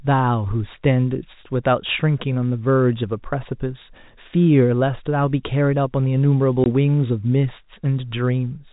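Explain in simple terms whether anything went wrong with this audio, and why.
At about 6.64 seconds the speech briefly drops out: a tiny hole of silence, lasting until 6.66 s, where the sound stops and restarts abruptly. This is packet loss filled with silence. The audio travelled in small chunks, a short stretch went missing, and the receiver played nothing in its place. The 20 ms gap fits two lost 10 ms packets. The narrow telephone-band sound, with nothing above 4 kHz, comes from the G.711 telephone coding.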